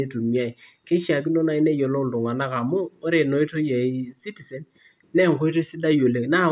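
No dropouts, distortion, glitches or level problems turn up anywhere in this speech recording, and the signal path shows no audible fault.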